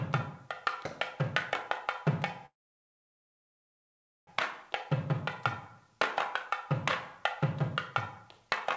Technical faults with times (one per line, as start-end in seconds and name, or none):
2.46-4.29 call audio freeze